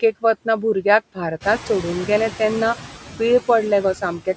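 Speech recorded through call microphone processing, with nothing above 8 kHz, carries noise suppressor artifacts throughout. The background is pulled down by about 9 dB and pumps between and under words. At around one and a half seconds the room noise jumps by about 13 dB, and from 1.4 to 2.74 s the noise suppressor is catching up. The louder noise first passes through with only about 6 dB of reduction, then sinks over 1.34 s as the noise estimate adapts. This one-off lag follows the noise step, which sets it apart from the constant word-by-word pumping. Afterwards the noise sits about 15 dB below the speech.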